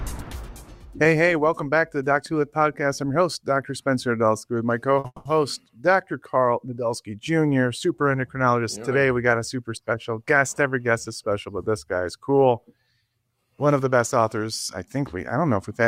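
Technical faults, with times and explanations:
4.99 to 5.06 s, short stall from a late packet: the sound at this point is held about 50 ms too long, with a faint buzzy, slightly dipping quality before it carries on. A packet failed to arrive in time and the jitter buffer ran dry, so the receiver stretched the last bit of sound to cover the gap. When the packet arrived, playback resumed from the same point. Nothing is lost, but the delay grows by 50 ms.
5.06 to 5.27 s, call audio freeze: right after the stall, the sound stops moving forward for about 190 ms. The held sound turns into a fading buzz, and the last 40 ms or so are silent. The likely cause is packets being held up in transit, which left the jitter buffer empty and forced the receiver to fill the wait with a decaying copy of the last sound. Playback then picks up where it stopped, so a gap has been inserted and the delay grows by another 190 ms.
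10.19 to 11.60 s, jitter buffer speed-up: for about 1.4 s the audio sounds slightly hurried, running at about 106% of normal speed while the pitch stays the same. The jitter buffer was holding more audio than its target after the earlier holdup, so the receiver cut many short pieces, each one or a few pitch periods long, in quick succession. Together they remove roughly a tenth of a second and bring the delay back down.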